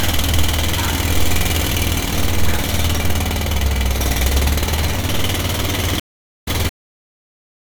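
At 6.00 s the connection drops and the player goes quiet for 416 ms, then reconnects and starts a new decoder partway through the stream. This stream reconnect leaves a gap ending at 6.48 s, and the sound picks up roughly half a second further on, with the missing material simply skipped.

At 6.69 s the final buffers were never written or played, so the clip has a cut-off end. The sound stops abruptly mid-event and falls straight to digital silence with no natural decay, and that silence lasts until the end.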